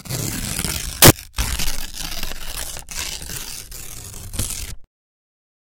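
A recording of sounds with one short hiccup: from 1.02 to 1.10 s it turns into a burst of loud, harsh broadband noise. That's samples built from the wrong bytes, where a misaligned or swapped byte order pushes the rapidly changing low bits up into the loud part of every sample value.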